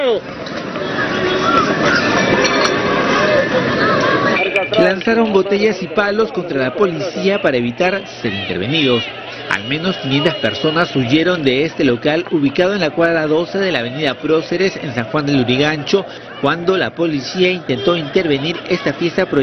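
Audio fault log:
No faults were detected in this recording.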